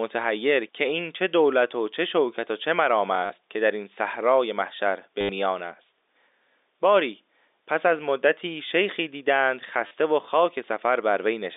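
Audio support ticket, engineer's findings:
Packet loss with last packet repeated at 3.26–3.30 s, 5.21–5.29 s and 9.87–9.91 s (40, 80, 40 ms). Receiver loops the last packet, buzzing near 100 Hz, consistent with 10 ms packets. Telephone-band G.711 path, 300 Hz–3.7 kHz, audible throughout.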